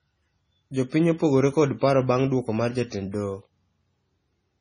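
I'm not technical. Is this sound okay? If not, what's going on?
No. MP3 compression damage runs through the whole clip. The speech sounds watery and swirly and dull, with nothing above 10.6 kHz. This is likely a heavily squeezed MP3: short of data, it threw away the treble, and faint detail flickers in and out.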